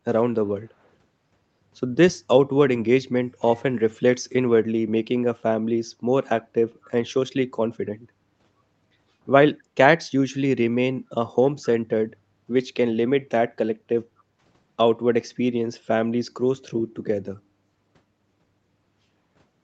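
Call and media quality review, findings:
Faint delayed repeat of the speech, roughly 250 ms behind, in brief scraps at 6.82–6.91 s and 11.62–11.67 s. Likely echo leak: far-end loudspeaker residue missed by the echo canceller.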